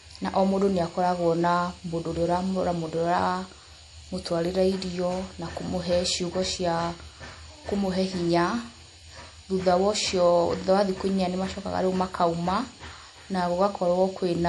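From start to finish the speech carries MP3 compression damage that's plainly audible, likely from a low-bitrate encode. Nothing comes through above 11.4 kHz, so the top end sounds shaved off, and the swirly, watery texture, especially around s sounds, is what you hear when the encoder runs out of bits and lets weak frequency lines flicker in and out frame to frame. That amount of smearing fits something like 48 kbps.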